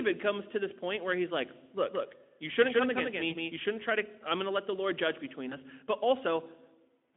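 From 1.90 to 3.58 s a doubled audio track runs: a copy about 5 dB quieter trails by around 150 ms, likely from a slower capture path, appearing abruptly with no echo-like decay. At 3.29 to 3.33 s and 5.49 to 5.57 s, VoIP packet loss concealed by the speech codec fills a lost 20 ms frame with a fading extrapolation rather than a silent gap, and the sound stays weak briefly after.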